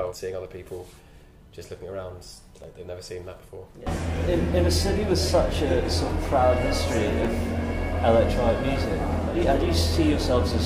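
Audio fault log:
0.46, 2.64 and 7.25 s: dropped samples. Sharp clicks, likely from a fraction of a millisecond skipped so the waveform jumps; unlike a dropout, there is no audible gap.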